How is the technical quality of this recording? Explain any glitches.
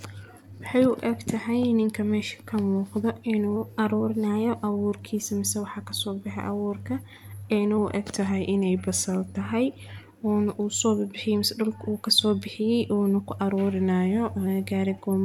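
The speech suffers from three drift correction steps. At 3.56–4.50 s, right after "ininka meeshii kan muuqda", the audio runs 6.3% fast and about a semitone sharp (106 cents). It runs 6.3% slow and 113 cents flat at 7.78–9.41 s and again at 13.71–14.47 s, after "soo bixiyay uuna ku". The likely cause is clock-matching software abruptly retuning playback to rebalance its buffer. Speed and pitch jump together, then snap back. On a spectrogram, the harmonics step up or down in parallel for each span, and the waveform compresses or stretches in time.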